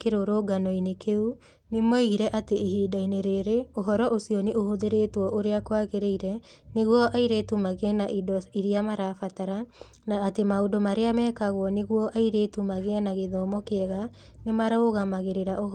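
A spoken-word recording, and there's nothing technically wrong to flag anywhere in it.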